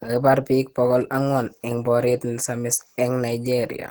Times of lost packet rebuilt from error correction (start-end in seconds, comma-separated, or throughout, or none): none